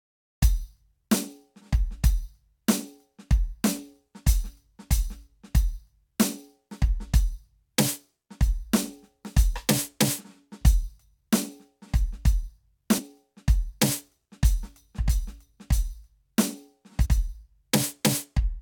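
At 12.98–13.00 s and again at 17.05–17.07 s the music breaks into a brief glitch from damaged data in the compressed stream: corrupted bytes make the decoder misread frames and lose sync. Each shows as a thin broadband vertical smear on a spectrogram and a jagged discontinuity in the waveform.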